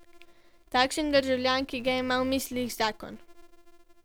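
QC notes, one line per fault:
Throughout: filter restarted on every block. A steady buzz at about 345 Hz rides under the speech and rises and falls with its level. The filter starts each block from silence, leaving a small transient every time. That pattern fits a 128-sample block.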